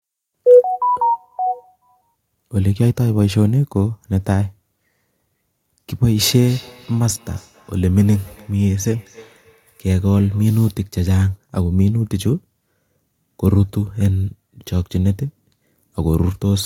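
From 6.31 s to 10.63 s the speech picks up a feedback echo between two devices: each syllable returns at a regular spacing of roughly a third of a second, at most about 26 dB below the direct speech, and each return sounds thinner and more ringing. A second device in the same room is replaying this microphone's signal, which is captured again, and neither echo canceller removes it. Unlike room reverberation, the repeats are distinct copies at a fixed interval, not a smooth decay.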